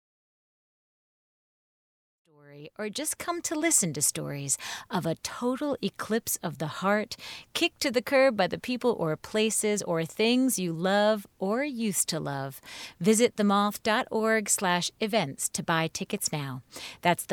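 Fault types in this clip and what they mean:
There are no fault types in this clip.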